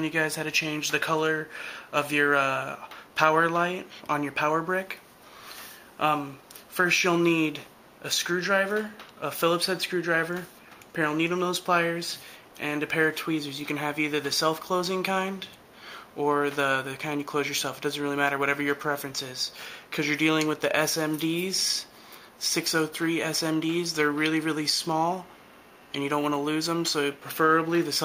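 No technical faults can be heard in the audio: the signal stays continuous and steady in level throughout.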